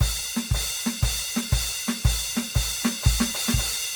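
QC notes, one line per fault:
throughout, generation loss: the music sounds swirly, hollow and smeared with blurred attacks, likely from about five rounds of MP3 re-encoding around 96 kbit/s, each pass adding new quantisation damage.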